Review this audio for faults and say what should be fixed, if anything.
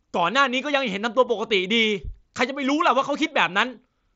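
Nothing stood out on listening to this speech, so there is nothing here that needs fixing.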